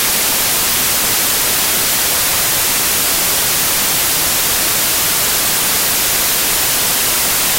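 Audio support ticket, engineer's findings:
Loud, harsh broadband noise across the whole clip, start to end. Diagnosis: samples built from the wrong bytes. Probable component: file reader or decoder's sample assembly stage. Bytes within each sample mis-combined, whether off by one byte, byte order swapped, or wrong alignment assumed. Fast-changing low-order bits end up as the most significant part of every value, so the sound itself is buried under noise.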